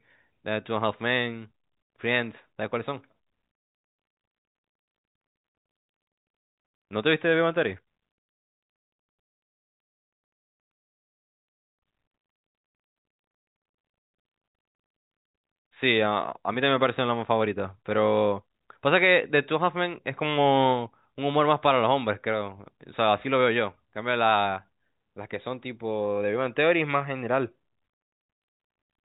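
No technical faults are audible.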